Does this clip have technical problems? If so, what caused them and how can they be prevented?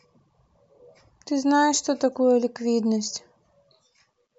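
No, nothing stood out as a technical problem on listening to this speech clip, so there is nothing here to trace back or guard against.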